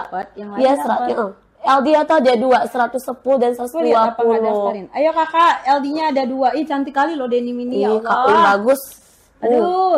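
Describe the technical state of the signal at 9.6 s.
At 9.6 s the signal is intact, with no audible fault at that moment.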